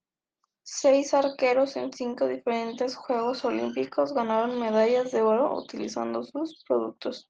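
No faults in this speech; the call-codec path is working as intended, its high end stopping near 12 kHz, which fits a super-wideband call codec at its normal setting.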